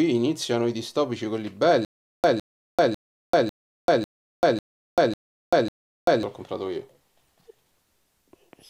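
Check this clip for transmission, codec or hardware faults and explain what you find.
One fault is present: a stutter with silent gaps from 1.85 to 6.23 s. The same 158 ms burst plays eight times, each followed by 390 ms of dead digital silence, on a steady 548 ms cycle. The likely cause is a stalled player or stream that replays its last fragment at each retry, then runs empty, so the audio due in that span is lost.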